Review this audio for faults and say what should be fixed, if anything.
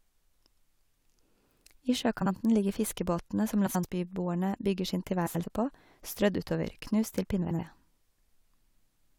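Frames out of order: neighbouring runs of frames were decoded in swapped sequence at 2.21–2.31, 3.66–3.84, 5.26–5.44 and 7.42–7.60 s. Each stretch of speech plays with its halves exchanged, about 43 ms blocks in the first and 85 ms in the rest. This is heard as a garbled flutter, though no time is lost. Reordering frames by sequence number before decoding would prevent this.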